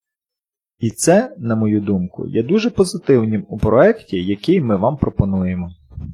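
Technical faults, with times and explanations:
No technical faults can be heard anywhere in the speech. Nothing in the recording calls for a time or an explanation.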